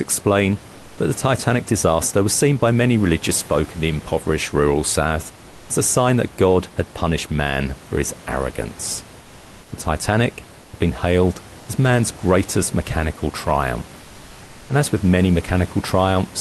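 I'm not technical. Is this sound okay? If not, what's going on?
No. At 10.61 to 10.73 s, 11.59 to 11.67 s and 14.01 to 14.69 s, comfort noise replaces the real background: a smooth, slightly quieter hiss, not silence, likely from the call pausing transmission between speech.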